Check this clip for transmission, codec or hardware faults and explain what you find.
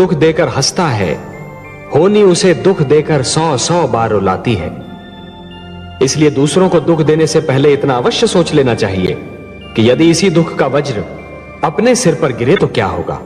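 Three brief corrupt frame decoded events are audible. The first is at 7.06 s, then 9.06 to 9.10 s, then 12.56 to 12.61 s. Each is a short chirp or burst of noise. Flipped bits in a compressed frame made the decoder misread gains or codes, so energy landed at the wrong frequencies. Each burst's length points to one or two damaged frames. The 9.06 s burst is loudest, around 0 dBFS. The 12.56 s burst peaks around -5 dBFS, and the 7.06 s blip around -15 dBFS.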